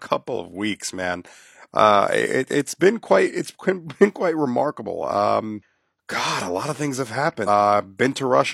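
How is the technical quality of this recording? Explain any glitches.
The speech has two glitches. Damaged data in the compressed stream, at 5.58 to 5.62 s just after "been quite remarkable" and at 7.43 to 7.49 s just after "a lot of things": corrupted frames leave the decoder misreading the audio and resyncing on a later header, which produces brief glitches lasting about 40 to 50 ms.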